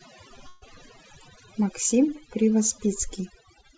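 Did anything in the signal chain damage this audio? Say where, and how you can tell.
Yes. Call processing applied overdone noise removal throughout, leaving near-silent background with twinkling specks. Unlike codec noise, it gates individual bands near the noise estimate.

At the network stage, a burst of packet loss from 0.48 to 0.64 s was concealed with about 136 ms of extended, fading sound, and roughly 140 ms of audio is gone. It isn't a dropout because the gap is filled rather than silent.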